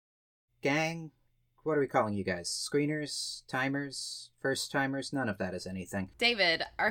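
No technical faults are audible.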